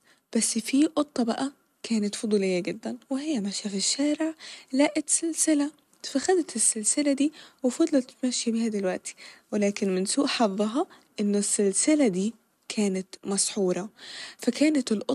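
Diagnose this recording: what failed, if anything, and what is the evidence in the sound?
Nothing in the signal chain has failed: the speech signal holds steady and continuous, with no audible disturbance from any stage between capture and playback.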